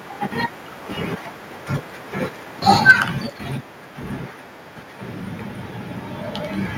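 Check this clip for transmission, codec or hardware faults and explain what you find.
Two hardware-side faults appear close together in this speech clip, one immediately after the other.

Microphone overload, 2.89 to 2.91 s: a brief harsh crackle rides on a loud peak. The likely cause is input gain set too high, so the peak drove the converter about 2 dB past full scale and its top was sheared off, affecting roughly a fifth of the samples in that span. On a waveform the crests look flat-topped. A spectrogram shows a short vertical smear of broadband energy reaching into the upper kHz range.

Microphone volume stepped down, at 2.91 s: right after that distorted peak, the voice and the background noise both drop by about 4 dB in a single step and stay at the lower level. This is likely the call software's automatic gain control detecting the overload and cutting the device's input volume at once, rather than fading it. 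On the waveform the envelope shrinks abruptly at that point. On a spectrogram every band, including the noise floor, darkens evenly at the same instant.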